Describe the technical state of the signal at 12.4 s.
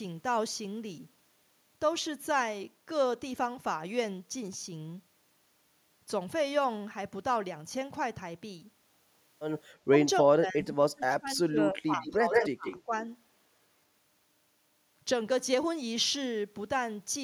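At 12.4 s the echo canceller is caught in double talk, with both sides speaking at once. Unable to separate the local talker from the loudspeaker echo, it has likely turned both down. This speech suppressed in double talk runs from 10.23 to 12.67 s. The speech dips and breaks up in pieces while the far side talks, adding up to about two seconds of lost level. At its deepest the drop reaches roughly 35 dB, close to a dropout.

Overlapping that, from 12.31 to 12.45 s, is an echo leak. One side is likely playing the call on a loudspeaker, and its echo canceller lets part of what its microphone picks up get back into the line. A delayed copy of the speech returns 154 ms behind the original as a short scrap, about as loud as the speech itself, so it sounds like a brief doubled fragment rather than a faint trace.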